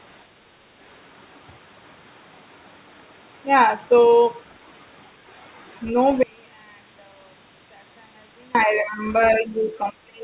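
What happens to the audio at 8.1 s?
At 8.1 s the speech is in the middle of an audio dropout to a faint residue, running from 6.23 s to 8.55 s, about 2.3 s. The signal cuts out abruptly and leaves only a faint trace roughly 30 dB below its normal level, likely because the wanted signal was lost while the path after the break stayed live. Unlike a natural pause or a fade, both edges are sudden, and the gap holds a low residue rather than true silence.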